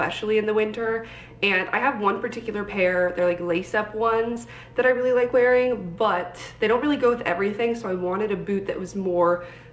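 At 4.34 to 4.38 s there is a short concealed packet loss. About 20 ms of audio failed to reach the decoder in time, and the receiver covered roughly 16 ms of that gap by extending the preceding sound, then crossfaded back into the real signal. It is heard as a brief smear or wobble. The surrounding audio carries G.722 call-path coding at 64 kbps, with no content above 8 kHz.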